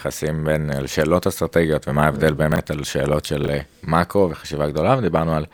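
At 2.52 to 2.58 s the speech briefly jumbles: chunks out of order, with a 20 ms piece landing two slots late, so you get a scrambled blip. At 3.44 to 3.48 s the same happens, one chunk late.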